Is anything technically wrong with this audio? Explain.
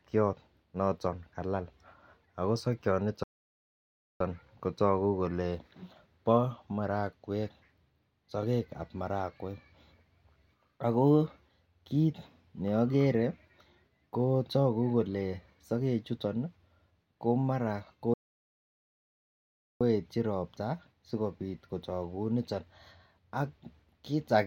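Yes. Playback stalls at 3.23 s, after "ago sokiot", for about 0.97 s, and at 18.14 s, after "ko mara", for about 1.67 s. The player likely ran dry of data, so the speech falls silent mid-flow before resuming with "kotogu kole" and "ropta sikobit".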